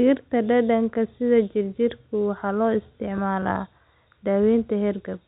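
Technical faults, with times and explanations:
No faults found; the speech carries the G.711 telephone band with nothing above 4 kHz and at most a faint level-tracking quantisation hiss from the 64 kbps A-law coding.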